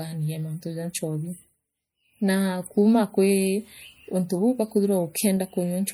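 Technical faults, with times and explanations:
Throughout, MP3 compression: the speech sounds watery and swirly, likely from a low-bitrate encode, around 64 kbps, dropping weak frequency lines.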